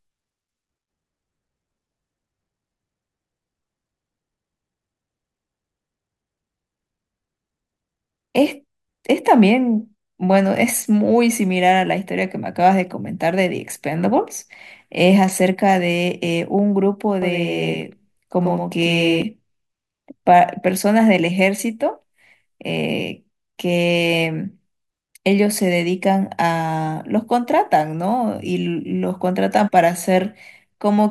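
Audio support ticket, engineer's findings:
Doubled audio track, 17.22 to 19.22 s. Speech heard twice. Second copy lags by roughly a tenth of a second, a few dB quieter, full-band, dry. Starts and stops abruptly. Likely a second capture path or misaligned edit layering a late duplicate onto the main track.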